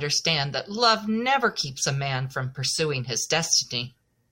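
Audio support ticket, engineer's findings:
No faults found in the audio; no symptom to assign to any component.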